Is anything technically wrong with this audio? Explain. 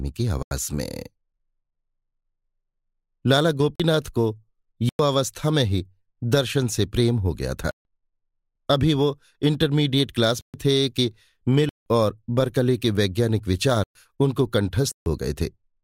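Yes. The speech has eight blocks of digital silence: 0.43–0.51 s, 3.76–3.80 s, 4.89–4.99 s, 7.71–7.85 s, 10.41–10.54 s, 11.69–11.86 s, 13.84–13.95 s and 14.92–15.06 s, lasting 43 to 171 ms. The signal drops abruptly to silence and returns without a fade, and each gap is heard as a short hole. Several lengths, such as 43, 85 and 171 ms, fit whole power-of-two buffers, which points to output buffers not being filled in time.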